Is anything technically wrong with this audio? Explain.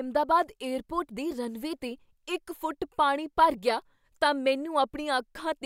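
No technical faults are present.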